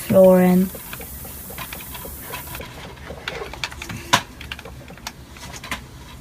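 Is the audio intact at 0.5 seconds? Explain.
No. At 0.5 s the audio falls inside a stretch of low bit depth with noise shaping running from 0.0 to 2.59 s: the signal is quantised to 7 bits, and the rounding error is steered upward in frequency, giving a steady, thin hiss only about 10 dB below the signal. A spectrogram shows a noise floor climbing steeply toward the top of the band, and the waveform looks coarse and fuzzy.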